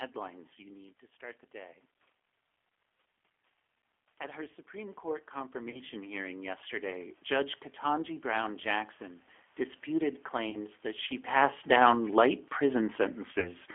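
Thin, band-limited speech runs through the whole 14-second clip. Nothing sits below about 300 Hz or above about 3.4 kHz, and the voice has a rough, slightly synthetic grain with a warble on the room noise behind it. That is plainly audible G.729 codec damage. This 8 kbit/s codec rebuilds each 10 ms frame from a vocal-tract filter, a pitch predictor and a few pulses instead of the true waveform, and here it sits on a telephone-band line.

From 4.17 s to 7.21 s, voice and background swell together by about 12 dB. This is automatic gain rising. The input level had dropped by about 11 dB, so the gain control slowly pushed its gain up to compensate, lifting the room noise along with the speech. The natural level shifts near 0.5 s and 11 s come from the talker moving and are a separate matter.

Three short dropouts turn the voice into a smeared buzzy tone or coloured noise that fades and stays weak for a moment afterward. 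They fall at 5.70 to 5.80 s, 10.50 to 10.59 s and 13.40 to 13.53 s. This is VoIP packet loss concealed by the speech codec. About 40 ms, 40 ms and 20 ms of audio went missing, which fits two, two and one lost 20 ms packets. The decoder filled each gap by extending its last pitch and filter with falling gain. Because each frame depends on the one before, the distortion outlasts the gap.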